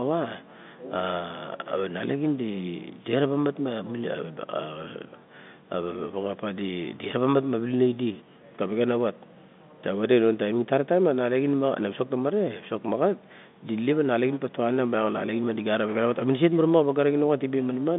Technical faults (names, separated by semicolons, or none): none